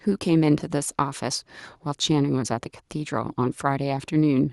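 No technical faults can be heard anywhere in the speech recording. Nothing interrupts, distorts or alters the audio at any point.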